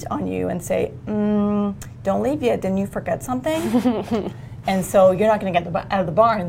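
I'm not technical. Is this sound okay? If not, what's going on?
No. All the way through, the top end sounds a little dull, and sharp, hissy or bright moments carry a faint metallic shimmer. This is imaging from linear upsampling. The audio was converted from 22 kHz to 44.1 kHz by simply joining neighbouring points with straight lines. That rough method softens the highest tones and leaves a quiet mirrored copy of the sound in the range between about 11 and 22 kHz, which causes the shimmer.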